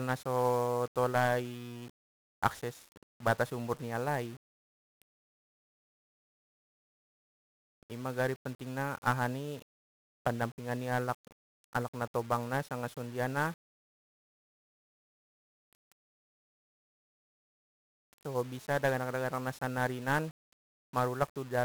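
From the start to the end, the speech carries heavy 1-bit DFPWM compression. Each sample gets a single bit that nudges an adaptive level up or down, and the 48 kbps stream this implies leaves strong broadband quantisation noise. Everything sounds fuzzy and crackly, and the treble is buried under hiss.

From 18.49 to 19.52 s, a GSM phone buzz appears. It is a hard, raspy tone at about 217 Hz with dense harmonics, about 32 dB below the speech, and it holds steady. That steadiness points to a 2G handset on a call, whose transmit bursts are rectified by the audio circuitry.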